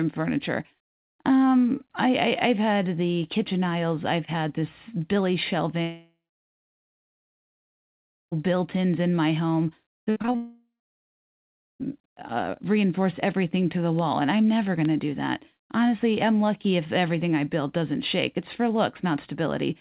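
At 5.82 s the speech turns into a short fading buzz and then about 2.2 s of silence, resuming at 8.33 s with roughly 2.5 s of audio gone. This is a long network dropout, likely a run of packets that never arrived, with the receiver briefly stretching the last sound before giving up.

Just after "in my home", from 9.89 to 10.36 s, the speech turns choppy and metallic. This is repeated packet loss: six separate holes, the longest 52 ms, patched by repeating the preceding sound, so about a third of that stretch is filler.

That choppiness runs straight into a second long network dropout from 10.36 to 11.81 s, again a brief fading tail and then about 1.1 s of silence. About 1.4 s of speech is missing, likely lost in transit, before the audio returns on "uh reinforce everything to".

Three isolated sharp ticks follow, each a bit error spike, a single flipped bit that throws the waveform far off for an instant. 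The first comes at 13.99 s, between "reinforce everything to the" and "and I'm never". The second is at 14.85 s and spans two samples. The third is at 18.71 s. Each is a broadband click unrelated to the speech. Throughout, the call path passes nothing above 4 kHz, which fits G.711 mu-law at 64 kbps.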